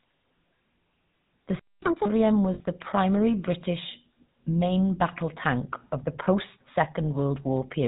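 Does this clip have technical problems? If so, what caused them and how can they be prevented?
Yes. The GSM full-rate codec colours the whole clip: the speech has a buzzy, gravelly roughness and nothing above 4 kHz, which fits 13 kbps GSM. It models the vocal tract and drives it with sparse pulses, throwing away fine detail. Using a wideband codec such as AMR-WB or Opus prevents this.

A playback stall silences the speech from 1.59 to 1.82 s, about 230 ms. The likely cause is the player running out of buffered data or its thread being blocked. A larger jitter buffer and a higher-priority audio thread prevent this.

Catch-up at higher speed follows from 1.82 to 2.06 s. The player resamples its backlog at 2.0 times normal speed, so pitch jumps by nearly an octave before dropping back to normal. Absorbing delay through a deeper buffer or time-stretching without pitch change prevents this.

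Lost GSM frames at 2.54 to 2.61 s, just before "the primary", hold the sound as a brief rough, metallic ring lasting 60 ms, which fits three missing frames. The decoder repeated the last good frame's settings. Error correction or redundancy on the link prevents this.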